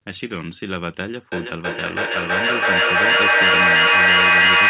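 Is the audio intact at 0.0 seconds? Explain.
Yes, the speech is intact at 0.0 seconds, with no fault there beyond the call path's usual narrowband sound, which has nothing above 4 kHz and fits a G.711 mu-law codec.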